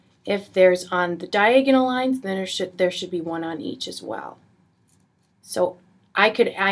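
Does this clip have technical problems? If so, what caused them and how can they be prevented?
No, this clip has no technical problems, so there is nothing to prevent.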